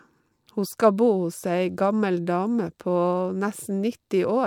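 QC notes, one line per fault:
No faults found on listening; nothing to log.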